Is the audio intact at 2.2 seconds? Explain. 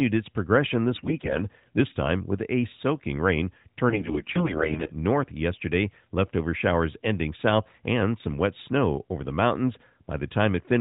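Yes, the audio is intact at 2.2 seconds, with no fault at that moment.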